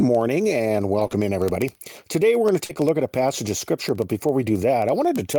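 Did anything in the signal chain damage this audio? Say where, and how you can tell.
Yes. Word clock ticks run from 0.15 s to the end at a steady rate of roughly one every 70 ms. At the digital link, an unlocked receiver clock slips one sample each time.

Lost packets rebuilt from error correction occur at 0.99–1.05 s, 1.11–1.13 s and 2.69–2.71 s. These are network losses, patched by the codec with rougher, noisier low-bitrate copies, so there is no gap.

Short concealed packet loss occurs at 1.07–1.11 s, 2.65–2.71 s and 2.73–2.77 s. The network dropped about 20–40 ms each time, and the decoder extended the preceding sound, leaving brief smears.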